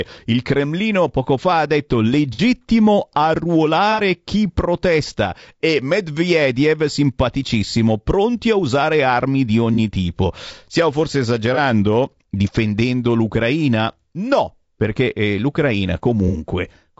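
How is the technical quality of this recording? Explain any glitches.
Quality is fair to poor: the speech is rough throughout, with five brief dropouts.

Throughout, the speech sounds grainy and rough, with noise between harmonics and a dull, synthetic top band, likely from low-delay AAC compression around 32 kbps.

AAC frame loss with concealment occurs at 2.33 s (after "poco fa ha detto"), 3.92 s (before "chi protesta e"), 9.74 s (after "a usare armi di"), 11.54 s and 16.28 s. The decoder fills each 30 to 60 ms gap, consistent with one or two missing frames, from the previous spectrum, giving a short smeared, noisy patch.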